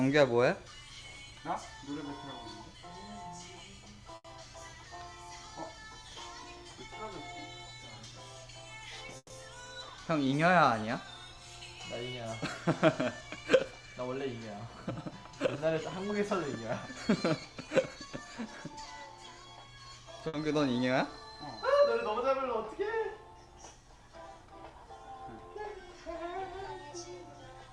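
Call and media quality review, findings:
Short stall from a late packet, 4.15–4.26 s and 20.28–20.49 s. Last sound held about 90 ms, then 60 ms, with a faint buzz or dip; nothing lost, resumes at the same point. Jitter buffer underrun. Unlike a freeze, no fade or silence.

Call audio freeze, 9.17–9.32 s. Sound drawn out as a decaying buzz or hiss for about 130 ms, ending in about 50 ms of silence, then resumes with nothing missing. Likely packets held up in transit, draining the jitter buffer. The fade to silence separates it from a short stall.

Jitter buffer speed-up, 13.21–14.23 s and 17.37–18.21 s at 111%, 27.23–27.69 s at 112%. Audio hurried, pitch unchanged. Receiver trimming pitch-period slices to shed excess buffered delay, roughly 100 ms, 100 ms and 70 ms. Faster pace rather than held sound sets it apart from the stalls.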